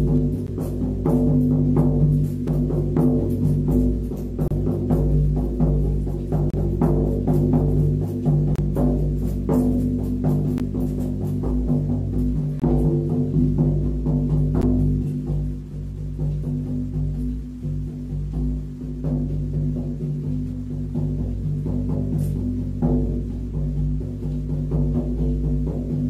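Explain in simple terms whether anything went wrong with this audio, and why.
There are gaps between stream segments: short silent holes at 0.47, 2.48, 4.48 to 4.51, 6.50 to 6.54, 8.56 to 8.58, 10.58, 12.60 to 12.62 and 14.62 s, lasting 4 to 32 ms. The segments' timing doesn't quite line up every 2 s, so the player fills each gap with silence, though no audio is actually lost.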